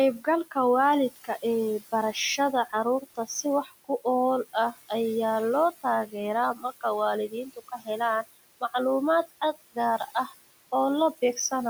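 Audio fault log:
Throughout: noise suppressor artifacts. The room noise, sitting about 17 dB below the speech, is pulled down by about 18 dB frame by frame, so the background sinks between phrases and swells back beneath them.
0.19–0.56 s, 1.1–4.91 s, 5.72–8.74 s, 9.27–10.33 s: speech cut by the noise suppressor. Quiet stretches of speech were mistaken for noise and turned down with the background. The drops reach about 11, 19, 17 and 12 dB. The second run ends just before "ayaa loo" and the third starts right after it. About a sixth of a second is affected in the shortest runs and about half a second in the longest, and there the affected speech sounds swallowed.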